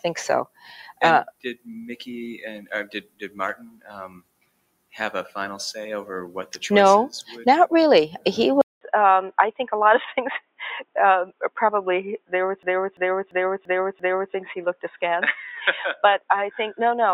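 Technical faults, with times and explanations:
Throughout: noise suppressor applied to music or sounds. A suppressor tuned for speech stayed active on this audio, treating sustained tones, ambience and reverberant tails as noise to remove. Its gain rides up and down by roughly 10 dB as it decides what to keep. Attacks pass largely intact while held portions and decays are pulled down, so the sound pumps and thins rather than sitting at a steady level.
0.46–0.70 s, 1.28–1.67 s, 3.02–3.38 s, 3.56–3.92 s, 4.08–4.94 s, 10.4–10.6 s, 14.74–15.00 s: sound cut by the noise suppressor. In each of these spans the suppressor classed the sound itself as noise and clamped down hard, with the deepest dips reaching about 14 to 21 dB. The sound sinks or has its tail chopped, then recovers. The longest, around 4.1 to 4.9 s, lasts close to a second.
8.61 s to end: input switched to a poorer device. The capture path changed here, most likely to a lower-grade microphone or a headset's call mode, with about 200 ms of silence at the changeover. 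After it, the band is narrower, so the sound turns dull and boxy. A new noise floor sits about 30 dB below the signal, while overall loudness stays about the same.
12.63–14.34 s: system hang loop. The host or driver stalled while the audio hardware kept replaying the same ring buffer, so a 341 ms slice repeats exactly five times. That gives a stutter at about 2.9 repeats per second, which fits a 16384-sample buffer. Playback resumes afterward without a gap, so the repeats sound like a skipping record rather than a dropout.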